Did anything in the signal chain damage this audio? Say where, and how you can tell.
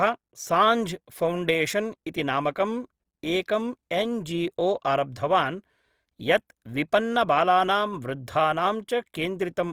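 Yes: Opus compression throughout, at the codec stage. The speech turns grainy and rough, likely from CELT-mode noise-filled bands starved of bits, which fits about 24 kbps.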